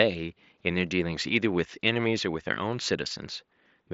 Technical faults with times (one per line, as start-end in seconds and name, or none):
none